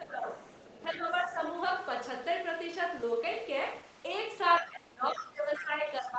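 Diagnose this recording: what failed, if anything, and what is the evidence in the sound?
The speech drops by roughly 15 dB from 0.0 to 0.29 s and from 0.61 to 1.71 s, and by roughly 20 dB from 4.6 s to the end, sounding thinned and broken up. This is speech suppressed in double talk, likely caused by the call's echo canceller ducking the talker while the far end spoke.

Faint scraps of a second voice break through at 0.46 to 0.61 s, about 30 dB below the speech, and at 0.93 to 1.0 s, 4.56 to 4.6 s and 5.19 to 5.24 s, about 20 dB below. This is the other side's voice leaking through, likely residual loudspeaker echo that the call-processing echo canceller failed to remove.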